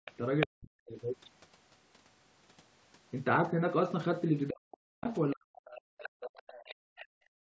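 From 0.05 to 0.47 s there is the other side's voice leaking through. The echo canceller likely failed to remove all of the loudspeaker signal from the microphone, so a second voice is heard at about 5 dB below the speech. At that level it is almost as loud as the talker and competes with them directly rather than sitting faintly behind.

Right after, from 0.46 to 0.98 s, comes speech suppressed in double talk. With both sides talking, the canceller likely could not tell its own talker from the echo and turned everything down. The talker's voice is cut hard, by around 40 dB at the deepest point, across about half a second. The same fault returns from 4.49 to 6.42 s, where the voice dips and drops out in pieces for about a second and a half in total.

From 6.03 to 7.06 s the other side's voice is leaking through again, this time much fainter, around 20 dB under the speech. The cause is likely the same incomplete cancellation, leaving a low second voice behind the talker.

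In the final stretch, from 6.75 s to the end of the clip, there is background gated by the echo canceller. While the loudspeaker was playing, the canceller clamped the microphone down, and the room sound falls away by about 38 dB. The room sound vanishes for roughly half a second instead of running on continuously.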